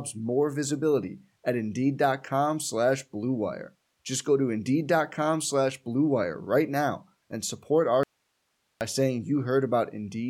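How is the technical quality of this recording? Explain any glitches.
The recording has one clear glitch: an audio dropout to a faint residue in the speech, running from 8.03 to 8.81 s, just after "now and support our". For about 0.78 s the signal cuts out abruptly and only hiss remains, sitting about 50 dB below the normal level. The cause is likely a brief loss of the source feeding a path that stayed live, so the gap carries the residual noise floor rather than true silence. The speech then resumes just as abruptly.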